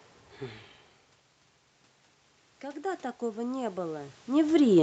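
From 2.61 s to 4.21 s you can hear automatic gain rising. The speech coming in dropped by about 17 dB, so the gain control started pulling the level back up, adding about 7 dB over those 1.6 seconds. Because the gain applies to everything, the voice and the room noise swell together in a slow, even lift. Around 4 s you can also hear the talker shift position, and the top end of the audio stops at about 8 kHz.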